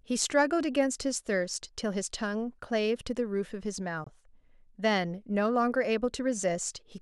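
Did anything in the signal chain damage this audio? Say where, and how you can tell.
Yes: a corrupt frame muted at 4.04 to 4.08 s. The speech cuts abruptly to silence for about 42 ms, which fits two compressed frames of roughly 20 ms rejected by the decoder as damaged and replaced with silence. Timing resumes unshifted, pointing to the codec stage.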